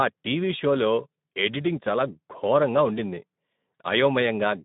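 Hoarse, grainy speech runs through the whole clip, with a noisy edge and nothing above about 3.8 kHz, in a narrow telephone-style band of roughly 150 Hz to 3.7 kHz. This is plainly audible Speex codec damage, a starved CELP excitation that fits a setting around 11 kbps.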